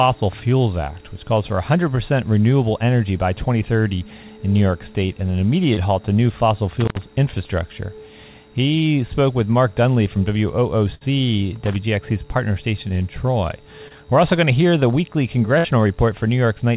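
At 5.74 to 5.79 s there is a brief smear where the sound wobbles and then blends back. This is short concealed packet loss: about 20 ms of audio never arrived, and the receiver extended the preceding sound for roughly 27 ms before blending back into the real signal. From 6.80 to 7.03 s an irregular burst of crackle and scratching cuts across the audio. That is loose connector crackle, a worn or dirty contact rapidly making and breaking so the signal is chopped into fragments.

At 10.95 to 11.07 s the sound hangs and fades, then resumes slightly further on. This is a burst of packet loss: about 60 ms went missing, the receiver stretched the last sound over about 61 ms while turning it down, and some 8 ms of audio was skipped. The same scratchy crackle returns from 11.53 to 11.76 s. Another quick wobble at 13.88 to 13.92 s is a second short concealment covering about 20 ms. A final held-and-fade dropout at 15.58 to 15.66 s is another burst, with about 60 ms lost and filled.

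Throughout, the call path carries nothing above 4 kHz, which fits G.711 mu-law at 64 kbps.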